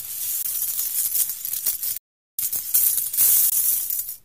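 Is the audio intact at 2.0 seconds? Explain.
No, a playback stall runs from 1.98 to 2.39 s, silencing the sound mid-flow for about 0.41 s. The likely cause is the player running short of data or its thread being blocked, so output stops until playback recovers and resumes.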